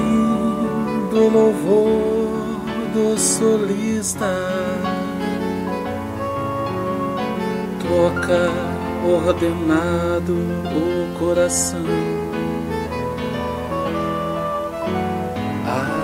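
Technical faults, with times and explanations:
Throughout, video or display buzz: a screen or video cable couples into the audio, adding a steady 60 Hz field-rate buzz with hash above it, roughly 25 dB below the sound. A spectrogram shows a 60 Hz line and dense harmonics spanning the full width.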